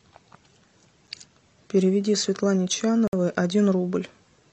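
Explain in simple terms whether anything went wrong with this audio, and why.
The speech cuts out briefly at 1.07 s and from 3.08 to 3.13 s. Each is a gap between stream segments, filled with silence. Nothing is lost.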